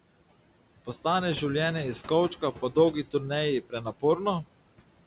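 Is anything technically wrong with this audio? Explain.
Yes. There are two faults, both from the noise suppressor. The room noise, sitting about 19 dB below the speech, is being processed, and the hard band edge at 4 kHz fits a G.711 mu-law call path at 64 kbps.

Noise suppressor artifacts run through the whole clip. The suppressor estimates the steady background and pulls down the bands it judges to be noise, cutting them by about 18 dB between phrases. On a spectrogram the gaps look darkened. The noise floor visibly lifts under each phrase and collapses after it.

Speech cut by the noise suppressor occurs between 3.63 and 4.03 s. Within that stretch the suppressor mistook a total of around a tenth of a second of speech energy for noise and attenuated it along with the background, with the deepest drop about 16 dB. Those moments sound swallowed or faint. The waveform envelope dips abruptly there, and the spectrogram shows speech harmonics or consonant energy fading out in patches instead of tapering naturally.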